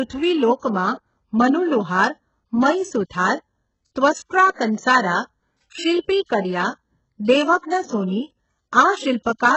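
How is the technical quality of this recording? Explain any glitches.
Technical quality is poor: heavy codec damage throughout and one pre-echo event.

Throughout the speech, the treble above 8 kHz is missing, and what treble remains sounds synthetic and gritty, with lispy s sounds. This is likely HE-AAC compression at a very low bitrate around 8 kbps, rebuilding the upper band from copied lower bands.

At about 0.59 to 0.63 s there is pre-echo: a short hiss spreads about 37 ms ahead of an attack, because block-wide quantisation noise fills the quiet gap before it, softening the onset.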